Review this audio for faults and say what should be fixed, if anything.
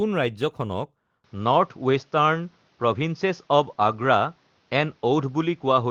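From 1.24 s to the end of the speech, the top end vanishes above 6.8 kHz, the level shifts by around 5 dB, and a new noise floor appears roughly 40 dB below the signal, with no gap at the change. This is likely an input switched to a poorer device. Prevent it by locking the capture device and disabling automatic headset call-profile switching.

At 2.91–3.01 s and 3.83–4.01 s, a lost packet rebuilt from error correction: about 60 ms and 100 ms of rougher, noisier audio, consistent with three and five separate Opus frames decoded from low-bitrate redundant copies. Prevent it by reducing network packet loss or adding jitter buffering.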